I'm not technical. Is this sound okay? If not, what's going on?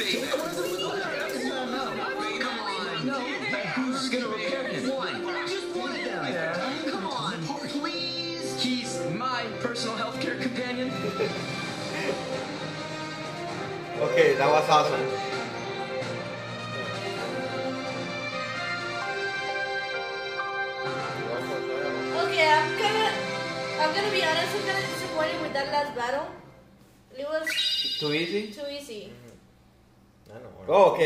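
Yes, no faults are audible.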